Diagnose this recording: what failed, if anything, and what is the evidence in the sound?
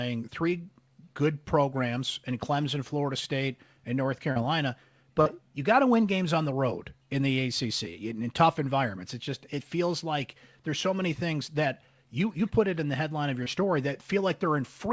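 Network stage: short concealed packet loss, heard three times in this speech clip, at 4.32 to 4.38 s, 5.22 to 5.27 s and 13.43 to 13.48 s. Each is a brief smear or wobble where roughly 40, 40 and 20 ms of audio arrived too late for the decoder. The receiver bridged each gap by extending the preceding sound, pitch-based where voiced and shaped noise otherwise, then cross-faded back into real signal. The band stopping at 8 kHz fits the G.722 call codec.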